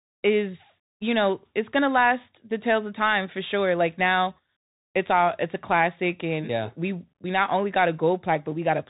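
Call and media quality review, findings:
Bluetooth CVSD headset codec, whole clip. Speech band-limited, nothing above 3.8 kHz; scratchy s sounds, granular hiss under speech, distortion on loud high content. Adaptive one-bit delta modulation, consistent with 64 kbps CVSD. Plain low-pass filtering would lack the hiss and grit.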